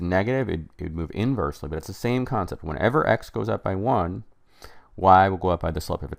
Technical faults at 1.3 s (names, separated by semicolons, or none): none